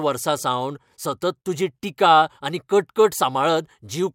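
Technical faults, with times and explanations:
Nothing stood out on listening to this speech recording.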